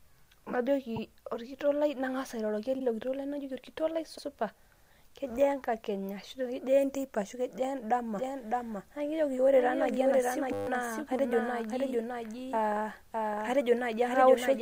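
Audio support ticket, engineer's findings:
Repeated frames: stutters at 0.96, 2.78 (after "lai nangasa airoroki") and 4.17 s (after "lai najoki orkitok lai"). Blocks of 52, 52 and 78 ms are replayed once, which fits duplicated codec frames. The waveform shows an identical segment twice.

Doubled audio track: from 8.15 s to the end, a full-band copy about 5 dB down trails by roughly 0.7 s. It likely comes from a second, slower capture path. The spectrogram shows the same pattern offset in time, with an abrupt onset and no reverb tail.

System hang loop: a 100 Hz buzz at 10.53–10.67 s. A 10 ms slice is looped 14 times while the driver or host was stalled, and roughly 0.15 s of audio is lost. The waveform shows an exactly periodic segment, and the spectrogram shows harmonic lines at 100 Hz spacing.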